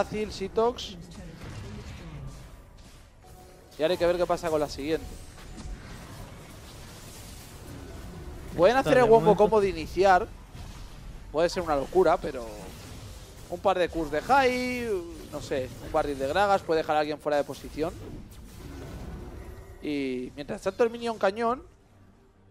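No technical faults can be heard anywhere in the audio.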